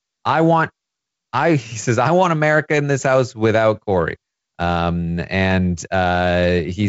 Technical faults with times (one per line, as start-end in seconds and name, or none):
none